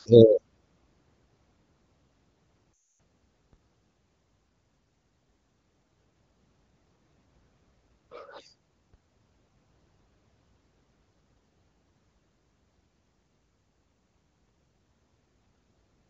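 Lost AMR speech frames at 2.75 to 2.88 s break up this speech recording: radio errors corrupted a run of frames, and the AMR-WB decoder, running at 15.85 kbit/s with only light coding damage of its own, filled the hole by repeating its last good pitch and vocal tract settings at falling gain. The sound drops to near silence within two frames, which fits a burst of consecutive lost frames, and returns thin and rough for a moment. DC steps at 3.53 s and 8.94 s each shift the waveform's zero line suddenly, and each is heard as a single low thump while the speech carries on unchanged. After each jump the offset drains away at the rate a 20 Hz high-pass filter would give, so it fades out smoothly rather than stepping back.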